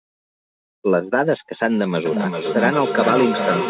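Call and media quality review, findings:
Feedback echo between two devices, 2.05 s to end: speech recurs at a fixed interval of about 0.4 s, up to about -4 dB. Mic-to-speaker loop across devices; repeated recirculation, unlike single echo.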